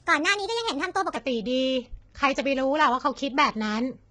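From 0.0 to 1.16 s, the opening section plays at the wrong speed. It runs about 1.29 times faster than it was recorded. Speed and pitch rise together, so the speech sounds high and hurried, lifted by about four semitones. At 1.16 s it drops back to its natural rate and pitch. The likely cause is playback or an edit tied to the wrong clock, so this stretch was read out too quickly.

Throughout the clip, the speech carries heavy low-delay AAC compression damage. The voice sounds rough and grainy. Noise fills the gaps between the pitch harmonics. The top band sounds dull and somewhat synthetic. The likely cause is an AAC-ELD encoder of the kind used in video calls. It codes about 500 frequency lines a frame with a low-delay window. The damage fits a low bitrate near 16 kbps.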